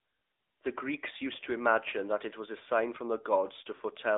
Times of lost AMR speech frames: 1.90-1.94, 3.76-3.82

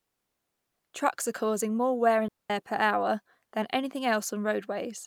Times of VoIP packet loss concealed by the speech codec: none

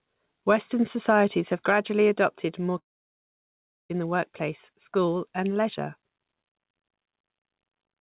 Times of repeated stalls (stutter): none

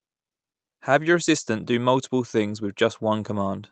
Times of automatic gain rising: none

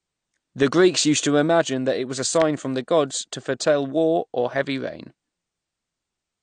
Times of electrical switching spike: 2.42

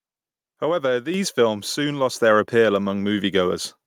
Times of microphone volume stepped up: 1.14, 2.16

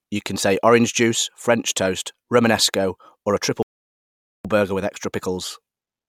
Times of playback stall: 3.63-4.45

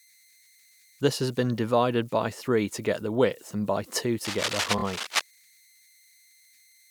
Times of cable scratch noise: 4.25-5.21

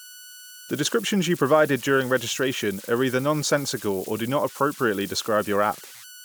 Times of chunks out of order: none

